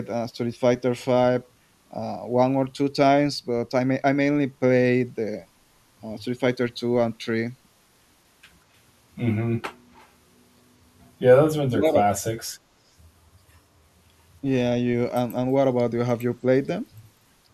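At 9.94 to 10.09 s there's a brief echo leak: a faint, delayed copy of the speech, trailing the original by about 193 ms and sitting roughly 35 dB below it, so it's a quiet ghost more than a clear repeat. The likely story is that the far end has the call on a loudspeaker, and its echo canceller missed a sliver of what its mic picked up and sent it back down the line.

Shortly after, from 11.61 to 11.98 s, there's speech suppressed in double talk. The speech gets pulled down hard, dipping by around 35 dB at its deepest, with about 300 ms of that stretch affected. That's likely both sides talking at once, with the echo canceller unable to tell the local talker from loudspeaker echo and clamping down on everything.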